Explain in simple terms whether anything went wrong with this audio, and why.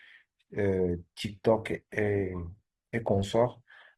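Something did go wrong here. At about 1.25 s the speech suddenly gets rougher, with more codec artefacts, and it stays that way right to the end of the clip. That's an adaptive stream at a lower bitrate: the connection slowed, so the player switched to a smaller, lower-quality version of the stream. It switched seamlessly with no gap, which is why you hear a jump in quality rather than a dropout.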